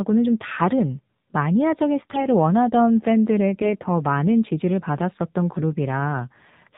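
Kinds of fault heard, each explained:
AMR narrowband mobile codec: throughout, the speech passes through the narrowband AMR mobile codec, which cuts everything above 4 kHz and rebuilds the voice from a vocal-tract model driven by sparse pulses. The plainly buzzy, synthetic quality fits a low rate around 7.4 kbps.
AMR bit errors: at 2.00 to 2.26 s and 5.52 to 5.59 s, flipped low-priority bits misplace the excitation pulses and skew pitch, gain and spectrum details. Level and pitch hold, but the voice turns hoarse and gargly, harsher in the second, briefer burst.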